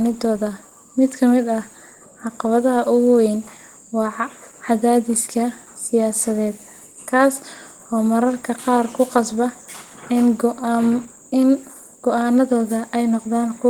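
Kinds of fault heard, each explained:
Opus compression: the speech was likely squeezed through a low-rate Opus encoder running in its hybrid speech mode, which fits about 16 kbps. The result is plainly audible hoarse, grainy roughness, though the band still reaches up to 20.1 kHz.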